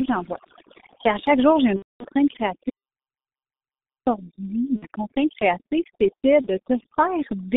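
Throughout the speech, the line runs through the G.723.1 codec, with heavy damage. Its 30 ms frames and slow voice model, at a rate that fits a 6.3 kbit/s stream, keep only about 200 Hz to 3.7 kHz, so the voice is muffled and hoarse and its consonants are smeared. Overdone noise removal is also applied throughout. It cuts bands that sit near the noise estimate, which leaves a lowered background with twinkling specks.

From 1.76 to 2.05 s, right after "à chaque jour j'ai", packets go missing. The decoder fills the gap by extending its last pitch and filter with falling gain, and the roughly 0.29 s gap fits about eight lost frames. This VoIP packet loss concealed by the speech codec sounds stretched and fades, and leaves the voice weak for a moment afterwards.

From 2.70 to 4.06 s there is an audio dropout to silence, likely from the input being lost while silence was still written. The sound cuts to silence for about 1.4 s, with no room tone, and whatever was said in that span is gone.

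Two shorter concealment events follow. The first runs from 4.76 to 4.86 s, just before "contrainte créative c'était", and the second from 6.41 to 6.48 s, just after that same phrase. Each is a brief smear that fits two lost frames and then one.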